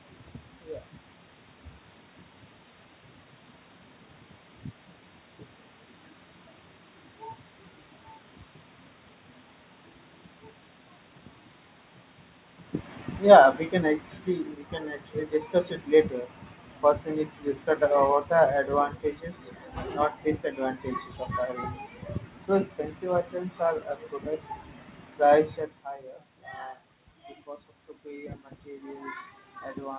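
From 13.17 to 18.7 s the automatic gain control makes a falling gain error. Just after the talker moves around 12.5 s, it judges the input too loud and pulls its gain down by about 9 dB over roughly five and a half seconds. The voice starts out strong and then sinks steadily, and the room noise sinks with it. The shared drop shows that the level change comes from the gain stage and not from the talker.

From 28.02 s to the end of the clip at 29.98 s the opposite happens: automatic gain rising. The input has become about 15 dB quieter, and after a talker movement around 25.5 s the control raises its gain slowly over the last two seconds. Voice and background swell up together. The audio is band-limited to 4 kHz throughout, which fits a G.711 mu-law call path at 64 kbps.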